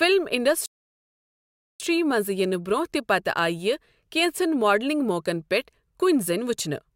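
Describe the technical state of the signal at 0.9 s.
At 0.9 s the signal is inside a rebuffering stall running from 0.66 to 1.8 s: playback exhausted its downloaded audio and halted, giving pure silence for 1.14 s. The speech then resumes exactly where it broke off, with nothing lost, only time added.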